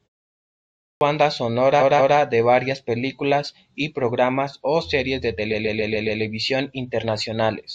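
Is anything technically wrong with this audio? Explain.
Yes, there are two kinds of fault in this speech clip.

Clipped start after a pause, at 0.41 s: after about 0.4 s of silence, the output device had gone idle and needed time to wake, so the first 0.6 s of sound, up to 1.01 s, is swallowed and speech begins abruptly without its opening.

Repeated frames, at 1.79 to 2.16 s and 5.51 to 6.20 s: a short run of compressed frames was delivered more than once, so the decoder replays it. Just before "de varias películas y", a 186 ms block plays twice more, adding 0.37 s. Right after "programas o series de", a 139 ms block plays five extra times, adding 0.70 s. Both are heard as a stutter.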